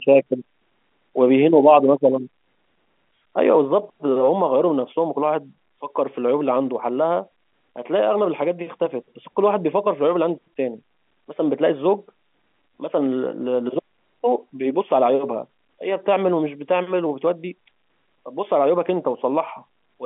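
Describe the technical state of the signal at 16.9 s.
At 16.9 s the speech comes through intact, with nothing beyond the narrow, band-limited sound of the G.711 telephone coding it passes through.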